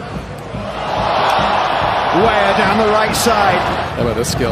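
No technical faults can be heard anywhere in it.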